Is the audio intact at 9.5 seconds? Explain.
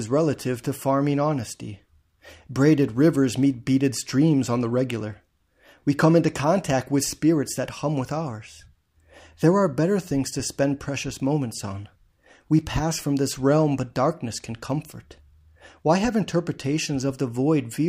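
Yes, the speech at 9.5 seconds is intact, with no audible fault at that moment.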